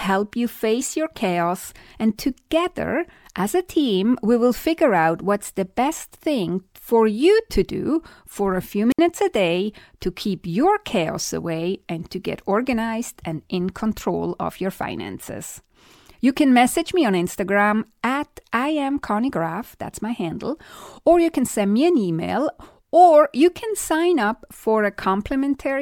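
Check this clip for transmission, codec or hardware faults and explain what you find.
One hardware fault is present. From 8.90 to 8.99 s, after "do for a few", a wireless microphone squelch dropout occurs: the FM radio link weakens, hiss swells briefly, then the receiver's squelch mutes output for about 65 ms, leaving a silent gap before speech resumes at "a day to keep".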